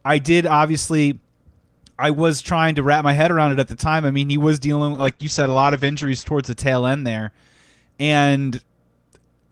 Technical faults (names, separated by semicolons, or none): call bitrate drop